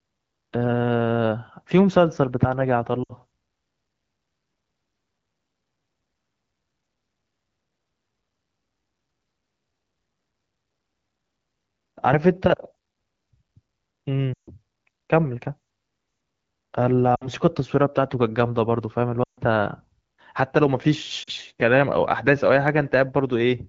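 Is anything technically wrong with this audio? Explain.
Yes. Lost AMR speech frames break the speech at 3.04–3.13, 14.33–14.50, 17.15–17.28, 19.23–19.40 and 21.23–21.30 s. The decoder stretches the last good sound with falling gain, so it smears and fades instead of cutting abruptly to silence.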